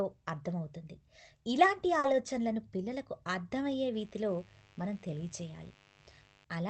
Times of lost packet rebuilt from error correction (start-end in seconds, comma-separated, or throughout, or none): 2.03-2.13